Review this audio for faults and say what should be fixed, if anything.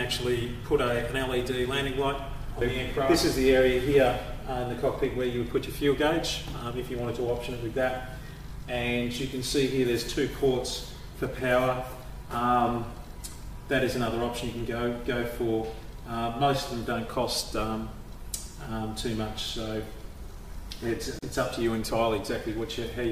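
A gap at a join of encoded pieces opens from 21.19 to 21.23 s, a gap of about 37 ms cut into continuous sound. The pieces were encoded separately and joined untrimmed, so one run's padded final frame and the next run's start-up delay both remain as dead air. Unlike a dropout, nothing is lost: the sound resumes exactly where it stopped, and the edges are smeared by the codec. To prevent it, trim encoder delay and padding at each join, or encode the whole program in a single pass.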